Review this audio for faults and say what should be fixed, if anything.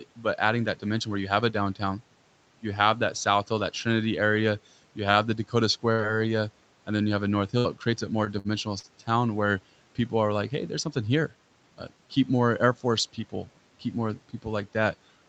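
A short stall from a late packet occurs between 5.11 and 5.16 s. A packet arrived late and the jitter buffer ran dry. The last sound is stretched by 20 ms, then playback continues where it left off. Nothing is lost. A slightly larger jitter buffer margin would absorb this delay.

A burst of packet loss follows from 5.92 to 6.01 s. About 60 ms of audio is gone. The receiver fills 62 ms by extending the last sound and fading it, then resumes further on. Forward error correction or redundancy on the link would recover such bursts.

Repeated packet loss (robotic sound) runs from 6.96 to 8.86 s. Five gaps appear, the longest 66 ms, with 120 ms missing in total. Concealment covers about 11% of this span, so the sound turns choppy. Fixing the unstable network path, or adding in-band FEC, would prevent it.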